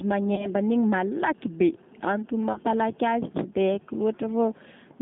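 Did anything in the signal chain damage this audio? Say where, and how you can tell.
Yes. The speech sounds rough and synthetic, confined to about 150 Hz to 3.6 kHz: G.729 codec damage, an 8 kbit/s coder rebuilding speech from a coarse filter-and-pulse model.

At 0.35 to 0.50 s and 2.53 to 2.60 s the speech turns briefly into a buzzy tone or coloured noise that fades, then stays weak or distorted: VoIP packet loss concealed by the speech codec. The decoder extrapolates over each 30 ms gap.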